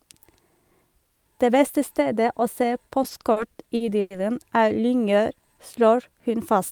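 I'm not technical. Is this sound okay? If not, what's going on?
No. From 3.03 to 4.13 s there are repeated stalls (stutter): the speech catches nine times, each pause up to 0.1 s, filled by stretching the last sound. It jerks stop-start, but nothing is lost.

From 5.36 to 6.29 s a jitter buffer slow-down plays the speech at about 91% speed with the pitch unchanged. It drags, with drawn-out sounds, rather than in jerks.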